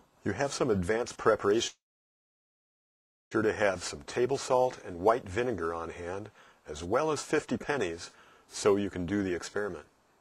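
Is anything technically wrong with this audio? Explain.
Yes, there's one problem. From 1.67 to 3.34 s the audio cuts out, likely a long network dropout. With nothing arriving, the receiver briefly carries the last sound on as a fading tail, then leaves about 1.5 s of silence. Playback resumes with roughly 1.6 s simply gone.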